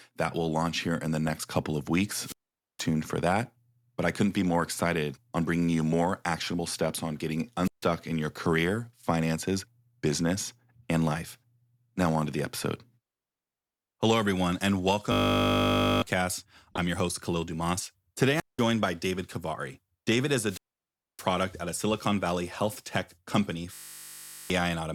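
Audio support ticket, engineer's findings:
Corrupt frame decoded at 1.27 s, 3.43 s and 16.7 s: short chirpy blips where damaged codec frames were played anyway, the 16.7 s one loudest, the 3.43 s one faint.

Wireless mic squelch dropout at 2.19 s, 7.63 s, 18.30 s and 20.46 s: hiss rises, then the receiver mutes for roughly 470, 150, 190 and 620 ms as the RF signal fades.

System hang loop at 15.12 to 16.02 s and 23.74 to 24.5 s: a steady 50 Hz buzz from one 20 ms buffer cycling, eating roughly a second and 0.7 s of audio.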